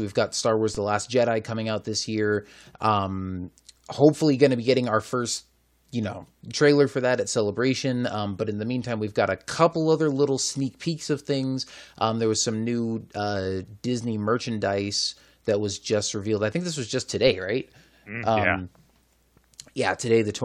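Speech with a DC step at 0.75 s: the waveform's zero line jumps by about -26 dBFS, then drifts back as a 20 Hz high-pass drains it, heard as a low thump and seen as a broadband vertical line on a spectrogram.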